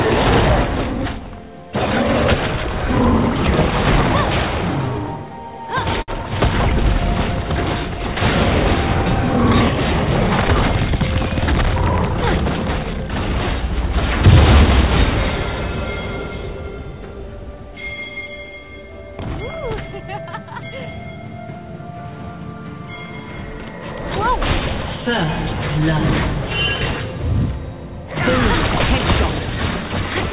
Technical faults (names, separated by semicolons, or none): short stall from a late packet